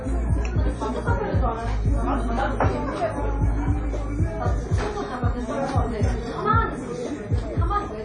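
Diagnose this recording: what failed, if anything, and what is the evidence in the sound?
Throughout the clip the sound rings and smears, with a washy hiss that swells and fades along with the signal, and nothing reaches above 10 kHz. This points to the codec stage, and the likely cause is WMA compression at a low bitrate, in keeping with about 32 kbps. The transform encoder's long blocks spread quantisation noise over tens of milliseconds around each event, and weak spectral lines are zeroed, leaving plainly audible damage and a hard ceiling on the top end.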